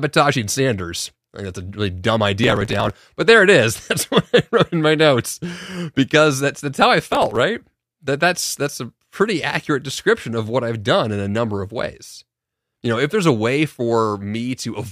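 A gritty burst of crackle tears through the speech from 2.44 to 2.90 s, just before "but there it is", and again from 7.00 to 7.40 s, after "that's that's how I". This is processor overload crackle: dozens of very short buffers, each a millisecond or two, missed their deadlines and were skipped, leaving rapid hard-edged gaps.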